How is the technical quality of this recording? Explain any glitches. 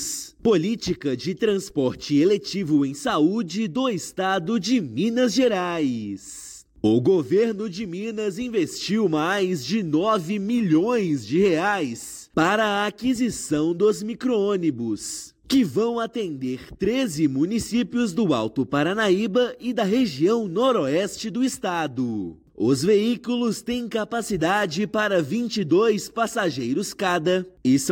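No glitches turn up anywhere in this recording. There are no dropouts, clicks, or level jumps to explain.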